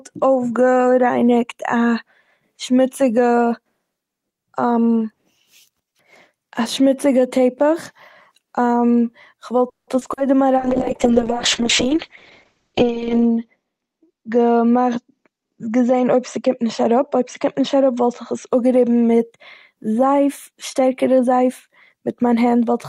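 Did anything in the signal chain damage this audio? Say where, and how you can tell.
Yes, the damage all happens in the call path, across three stages.

Network first: from 9.69 to 10.19 s there's repeated packet loss, and it sounds robotic. Four holes land in that half second, the longest about 180 ms. The receiver papers over each one by stretching the last bit of sound, so roughly half the stretch is synthetic fill. Another 80 ms just drops out. That gives the choppy quality.

Right after, at 10.58 s, you get a call bitrate drop that lasts to 18.55 s. The bandwidth estimate fell and the encoder was squeezed from 32 kbps down to 6 kbps, sitting at the bottom for about 2.7 s. At that rate the codec also narrows the audio band from 20 kHz to 8 kHz. So the speech goes dull and watery, with the top end gone, until the bitrate climbs back.

Then the jitter buffer speeds up twice. From 13.07 to 13.64 s it runs about 10% fast, trimming something like 70 ms. 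From 20.50 to 22.22 s it runs about 6% fast, trimming roughly a tenth of a second. The buffer had piled up extra audio and drained it by cutting out short pitch-period chunks. The pitch stays put, but the speech sounds hurried in those spots.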